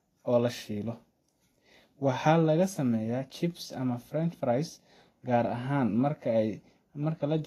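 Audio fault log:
Throughout: Vorbis compression, heard as a hissy, grainy sheen on the speech, with roughened vowels and softened consonant onsets, and nothing above 14.2 kHz. The treble is likely coarsely quantised at a low bitrate around 33 kbps, turning fine detail into noise, unlike plain band-limiting, which would simply dull the sound without adding grain.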